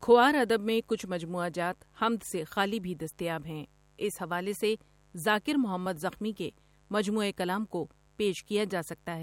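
Mains buzz runs under the speech for the whole clip, roughly 35 dB below it. Sharp switching spikes, twice in every 50 Hz cycle, have leaked into the signal path, spreading harmonics up to several kHz and producing a steady, raspy buzz.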